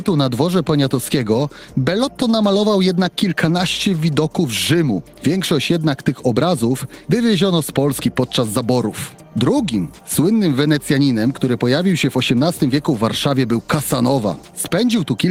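No technical faults can be heard anywhere in the audio, which stays continuous and steady throughout.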